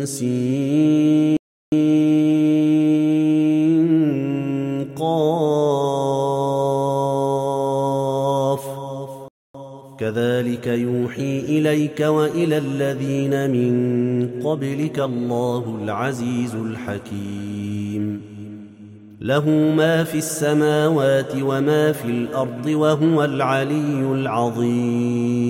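At 1.37 to 1.72 s and 9.28 to 9.54 s, playback stalls: the sound halts for 0.35 s and 0.26 s, likely from buffer starvation, leaving flat, empty gaps in the waveform and spectrogram.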